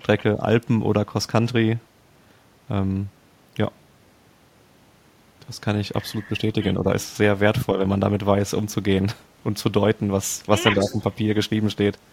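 Speech clip with two brief dips, one from 6.8 to 6.87 s and a longer one from 10.75 to 10.99 s, where the voice drops by roughly 5 dB. That's speech suppressed in double talk, most likely the echo canceller treating overlapping talk as echo and turning everything down. Right on top of the second dip, from 10.8 to 11.14 s, there's a faint copy of the voice trailing by 153 ms, sitting around 15 dB under the speech. That's an echo leak, likely the far end's loudspeaker pickup getting past its canceller and coming back down the line.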